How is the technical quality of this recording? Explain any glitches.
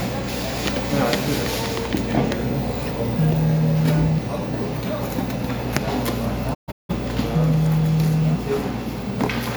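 One glitch stands out. At 6.53 to 6.94 s there is a digital broadcast dropout. The receiver muted after corrupt or missing frames. The sound fades in 20 ms, breaking into short holes over 340 ms; the longest lasts 170 ms.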